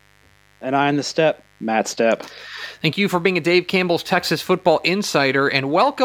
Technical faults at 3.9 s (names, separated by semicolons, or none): mains buzz